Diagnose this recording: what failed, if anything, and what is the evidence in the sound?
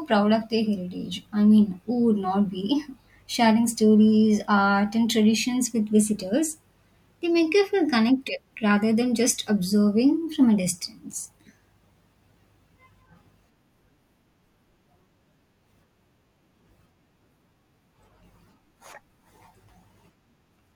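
Nothing failed: no stage from the analogue wiring and converter through buffering, processing, transport, storage and playback leaves any audible mark on this speech recording.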